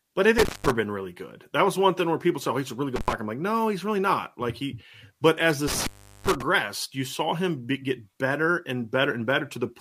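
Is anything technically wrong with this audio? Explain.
Yes. Intermittent contact at 0.38–0.71 s (before "been really good"), 2.96–3.13 s (after "he's a really good"), and 5.68–6.42 s (after "he but as the"). A loose connection briefly opens, dropping the speech for about 190 ms, 70 ms and 380 ms respectively, with crackle at each break and faint hiss in the gaps.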